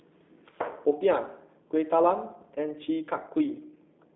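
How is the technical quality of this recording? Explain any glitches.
Technical quality is limited by G.729 codec damage throughout. The speech is intelligible but plainly rough and synthetic. Nothing above 3.8 kHz survives, and the telephone band runs about 0.3 to 3.7 kHz. The coarse rebuild from a vocal tract filter, pitch predictor and few pulses fits 8 kbit/s.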